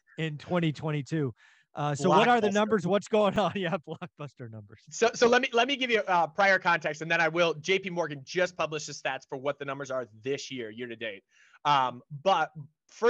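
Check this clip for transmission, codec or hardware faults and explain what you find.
There's one fault, a repeated buffer at about 3.36 s. Fresh audio didn't reach the device in time, so it played its last 5.8 ms chunk once more, which fits a 256-sample buffer. The doubled slice and hard join come across as a tiny click, with a few milliseconds of audio lost.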